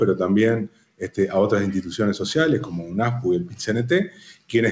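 From the start, a noise suppressor built for speech is acting on this material, so the fault is a noise suppressor applied to music or sounds. It treats sustained tones, ambience and decays as noise to be removed, and its gain keeps moving, with the level swinging by around 10 dB. Onsets come through largely intact while held portions sag, giving a pumping, unsteady quality over a band that stops at 8 kHz.

The sharpest cases are sound cut by the noise suppressor. From 0.67 to 1.18 s the suppressor clamps down hardest, with the level falling by about 17 dB, so the sustained part thins and drops away. A shorter dip runs from 3.45 to 3.62 s at about 11 dB. From 4.06 to 4.53 s it pulls down by about 16 dB again.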